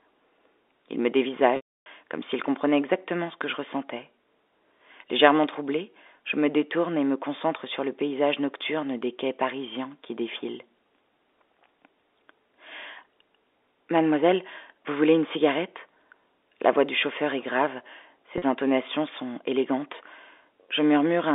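Packet loss with pitch repetition interrupts this telephone-band speech, carried on a G.711 line of 300 Hz to 3.6 kHz, at 1.56 to 1.86 s and 18.38 to 18.42 s. The receiver loops the last pitch period, so the 300 ms gap fades to silence and the 40 ms gap sounds like a brief held buzz.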